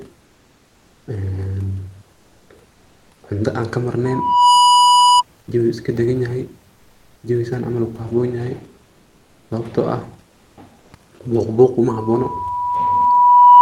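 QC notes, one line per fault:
0.25–1.07 s, 2.13–2.49 s, 6.75–7.23 s, 8.83–9.49 s and 10.29–10.57 s, comfort noise in place of the background: in these pauses the faint room background, about 40 dB below the loudest sound, turns into a smooth, featureless hiss, up to about 6 dB quieter (the 10.29 s gap drops most; the 8.83 s gap holds level). The likely cause is the Opus codec's discontinuous transmission halting during silence, so the receiver fills each gap with synthesized noise.
4.05–5.23 s and 11.88 s to the end, loudspeaker feedback squeal: a pure tone at 981 Hz rises out of the sound. The first rises in about half a second to roughly 10 dB above the signal. The second rises more slowly, over about 2 s, to roughly 15 dB above and continues until the end. The microphone is picking up its own loudspeaker, and at 981 Hz the loop gain exceeds one, so that frequency keeps reinforcing itself.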